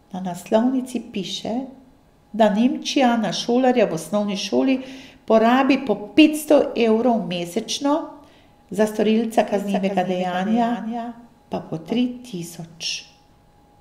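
At 9.54 s, right after "za storilca", a doubled audio track appears until 12.06 s: a second full-band copy of the speech trails around 400 ms behind, about 10 dB quieter, with no reverberant tail, and cuts in and out abruptly. This likely comes from a slower parallel capture path.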